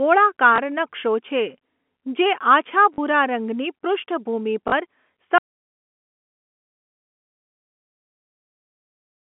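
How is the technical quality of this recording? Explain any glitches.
Three brief glitches interrupt the speech, which comes over a telephone-band line that passes roughly 200 Hz to 3.4 kHz. Packet loss with last packet repeated hits at 0.56 to 0.58 s, 2.94 to 2.98 s and 4.68 to 4.72 s. The receiver lost 20 ms, then 40 ms twice, and refilled each gap with the previous packet. The repeat rarely lines up with the pitch cycle, and the 40 ms gaps give a short robotic stutter.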